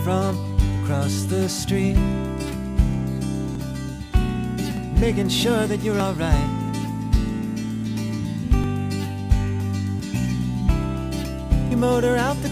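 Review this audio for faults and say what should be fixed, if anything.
Five forward jumps in the sound, at 3.55, 4.77, 6.00, 8.64 and 11.71 s, each removing roughly 10 to 40 ms, the later ones larger. There is no gap; the audio on either side of each loss is butted together. This is likely a dropped buffer (overrun): the capture software failed to read its buffer before the hardware overwrote it. Preventing it needs a larger capture buffer or higher read-thread priority.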